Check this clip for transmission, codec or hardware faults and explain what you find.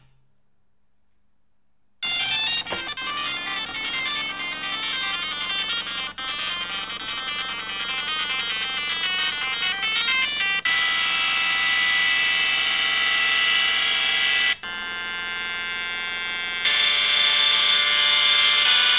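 No transmission, codec or hardware problems can be heard anywhere in the audio, and the signal stays continuous and stable throughout.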